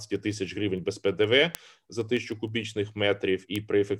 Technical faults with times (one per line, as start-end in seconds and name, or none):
0.16-3.86 word clock ticks